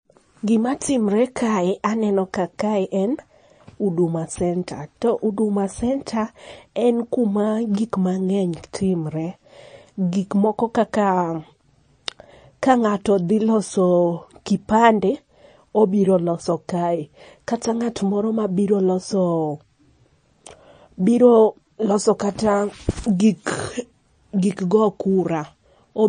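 MP3 compression, throughout: nothing survives above 9.4 kHz, and speech sounds watery with chirpy s sounds, likely from an encoder starved of bits, fitting roughly 34 kbps.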